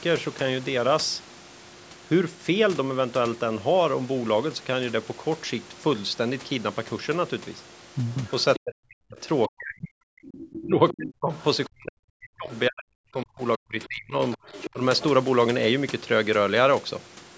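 From 8.11 to 8.59 s, and again at 10.24–10.93, 11.39–11.44 (much fainter) and 14.32–15.03 s, the other side's voice leaks through at about 15 dB below the talker. It is likely echo the canceller missed. It is a separate second voice, not a smear of the talker's own sound.

From 8.59 to 11.32 s and 11.68 to 14.38 s, speech is suppressed in double talk. The talker dips by as much as 40 dB, with a shallower 10 dB dip at 14.73–14.81 s. This is likely the canceller muting both sides, and unlike a dropout it tracks the other side's speech.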